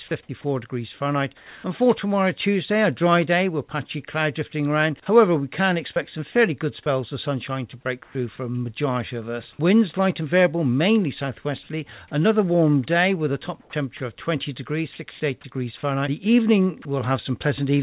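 Between 1.37 and 1.64 s, the sender likely stopped transmitting during a pause in the sound (discontinuous transmission), and the receiver filled the gap with synthetic comfort noise in place of the background. The real background gives way to a flat, featureless hiss about 4 dB quieter for 270 ms. The same substitution recurs at 8.03 to 8.15 s, about 5 dB quieter, and at 13.61 to 13.73 s, about 6 dB quieter. In each case, the detail of the background noise is smoothed into a steady wash.

Inside that last gap, the voice detector was likely slow to register that sound had resumed, so the onset was clipped by the voice detector. The first 40 ms, from 13.69 to 13.73 s, were never sent, and comfort noise stands where the soft start should be. The sound begins abruptly.

The detector then likely mistook parts of the sound for background and cut transmission, leaving sound dropped by the voice detector. 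At 13.97 to 14.00 s, about 20 ms of sound is lost. At 14.93 to 14.99 s, 60 ms is lost. At 16.82 to 16.85 s, 30 ms is lost. Each time, a brief patch of steady noise punches through before the sound returns.

Between those, at 15.11 to 15.20 s, comfort noise again replaces the background, this time about 6 dB louder than the real noise floor, so the pause briefly swells into a hiss. Throughout, nothing above 4 kHz is heard, which fits a narrowband call codec such as G.711.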